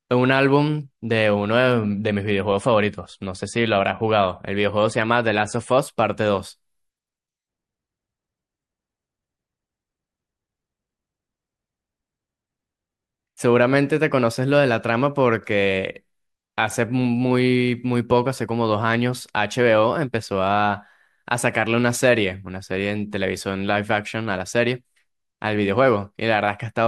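Speech, with one adaptive stream at a lower bitrate: from 1.79 to 5.79 s everything above 10.6 kHz disappears and artefacts thicken with no gap, pointing to a dip to around 41 kbit/s MP3.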